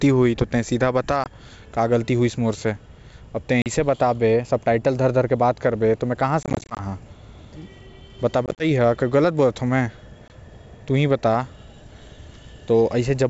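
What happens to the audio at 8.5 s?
At 8.46 to 8.63 s there's packet loss on an ADPCM call: about 80 ms of audio drops to hard-edged silence in short gaps, the longest around 30 ms. The decoder's predictor and step size lose sync with the sender's, so the sound comes back slightly distorted before settling.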